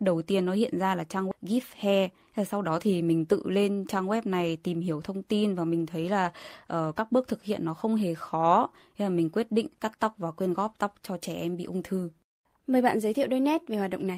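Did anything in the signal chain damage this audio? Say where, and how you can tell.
Yes. A skip ahead at 1.31 s: the network or the jitter buffer discarded about 0.4 s of speech, so playback jumps forward with no gap.

From 1.45 to 3.29 s, a jitter buffer speed-up cut short pitch periods, so speech runs at 106% speed, hurried but at unchanged pitch.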